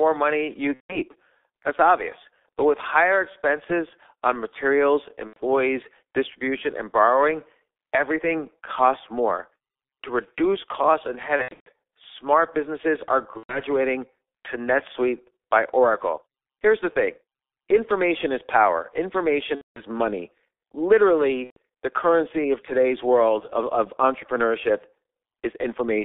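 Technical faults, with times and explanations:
Throughout, G.723.1 codec: the audio is confined to about 300 Hz to 3.6 kHz, and its slow 30 ms frame model leaves the speech muffled and hoarse, with heavily smeared consonants.
0.75 to 21.57 s, VoIP packet loss concealed by the speech codec: there are gaps at 0.75–0.99 s (after "money you"), 5.27–5.38 s (after "higher expenses on materials"), 11.36–11.69 s (between "reduce costs and" and "smart businesses are", with scattered losses), 13.37–13.63 s, 19.55–19.82 s and 21.44–21.57 s. In each, the decoder extends its last pitch and filter with falling gain, and the voice stays weak or distorted briefly afterwards.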